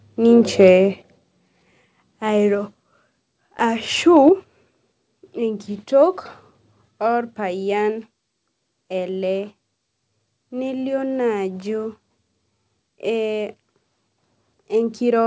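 From 0.6 to 0.71 s the loudest peaks square off with a harsh crackle, about 2 dB past the converter's limit, a small share of the samples flattened. This is microphone overload, likely an input gain set too high for the converter. At 1.02 s the level drops abruptly by about 4 dB, voice and background together. That is the microphone volume stepped down, likely the call software's automatic gain control reacting to the clipping. The pattern repeats: microphone overload from 4.16 to 4.29 s, milder at about 1 dB over, then an immediate step down of about 5 dB at 4.29 s. Throughout, the call path carries nothing above 8 kHz.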